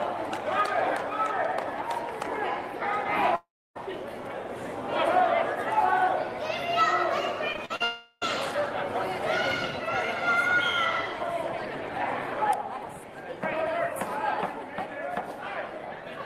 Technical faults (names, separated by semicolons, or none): long network dropout; repeated packet loss (robotic sound)